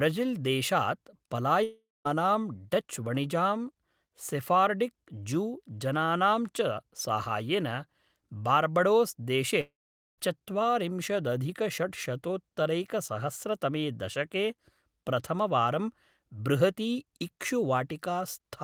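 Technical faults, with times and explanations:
1.63–2.07 s and 9.61–10.20 s, long network dropout: the sound stretches into a fading buzz, then goes silent for 0.22 s and 0.47 s, likely from lost packets. About 0.42 s and 0.58 s never return. Spectrograms show smeared, decaying bands before a blank gap. Waveforms taper to a flatline.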